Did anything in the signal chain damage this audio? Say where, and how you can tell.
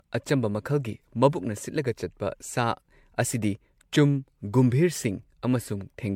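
Yes. The speech sounds swirly, smeared and hollow throughout, with blurred consonant attacks and nothing above 19.6 kHz. That points to generation loss at the codec stage, likely from re-encoding to MP3, around 96 kbit/s, about seven times over. Each pass requantises on a shifted frame grid, so the errors compound. On a spectrogram this appears as flickering holes and smeared bands in the upper range, with a hard ceiling at 19.6 kHz.

There are overlapping chunks at the buffer or driver stage, heard as brief clicks or stutters at 1.03, 3.03 and 5.04 s. The spacing fits 2 s chunks, each starting about 6.5 ms before the previous one ended, so that slice plays twice at every join. On the waveform, each join shows a step discontinuity followed by a repeated 6.5 ms stretch. On a spectrogram, each appears as a thin vertical broadband line.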